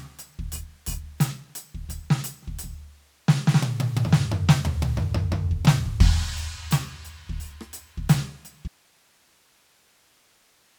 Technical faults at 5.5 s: none

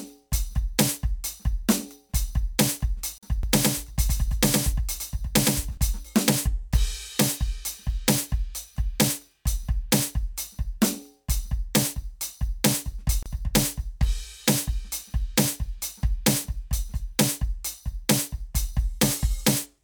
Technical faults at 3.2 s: gap at a join of encoded pieces

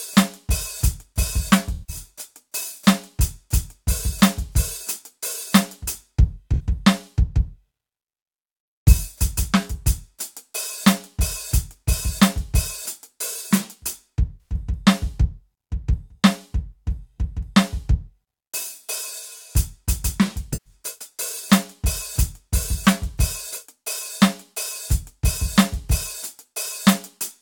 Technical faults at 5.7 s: none

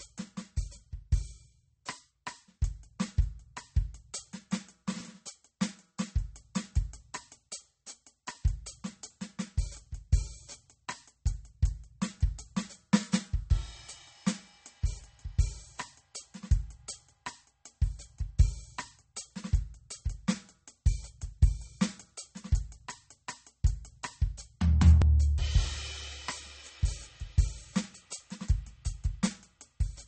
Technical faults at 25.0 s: MP3 compression; overlapping chunks

